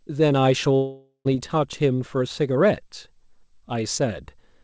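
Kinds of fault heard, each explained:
long network dropout: Between 0.76 s and 1.27 s about half a second of speech never arrives, most likely from packets lost on the call link. The receiver extends the last sound as a buzz or hiss that fades across the gap, ending in about 0.1 s of near silence before speech resumes without the lost part. A spectrogram shows smeared energy dimming to a blank band; the waveform shows a decaying envelope, then a flat stretch.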